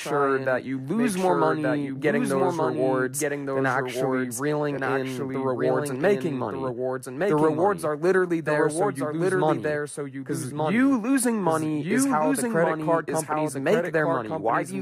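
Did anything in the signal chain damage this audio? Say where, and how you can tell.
Yes. Throughout the speech, a doubled audio track is audible: a second full-band copy trails the original by about a second, sitting about 5 dB lower. It carries no decay or room colour, so it is not reverb or an acoustic echo; it is the same signal mixed in twice at a fixed offset. The likely cause is at the capture or routing stage, where the audio is picked up a second time through a slower path, or an edit has left two copies out of step.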